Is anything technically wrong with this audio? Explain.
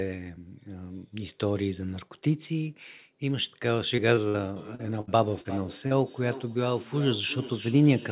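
Yes, three kinds of fault are audible in this speech, all from about 4 s on, heard through a call path whose missing content above 4 kHz fits narrowband G.711 mu-law coding.

Short concealed packet loss occurs at 3.96 to 4.00 s, 4.16 to 4.19 s, 4.75 to 4.81 s, 5.41 to 5.47 s and 5.87 to 5.93 s. Each time, 20 to 40 ms of audio arrived too late, and the receiver extended the preceding sound to cover it, leaving a brief smear or wobble.

A burst of packet loss hits at 4.29 to 4.38 s and 5.01 to 5.09 s. About 60 ms went missing each time. The decoder stretched the last sound while fading it, producing a held buzz or dying hiss before the speech jumps forward past the lost stretch.

Feedback echo between two devices runs from 4.56 s to the end. A second device in the same room replays the call into a microphone that doesn't cancel it, so the speech returns roughly every 0.4 s, peaking about 12 dB below the speech and growing thinner and more ringing with each pass.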